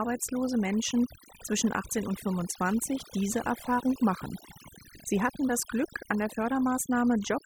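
From start to finish the speech carries overdone noise removal: a noise reduction stage set too aggressively has pulled individual frequency bands down or out wherever they sat close to its noise estimate, taking quieter parts of the voice with them. The pauses fall to near silence sprinkled with twinkling specks. Unlike a noise gate, which shuts the whole signal at once, the damage here is band by band.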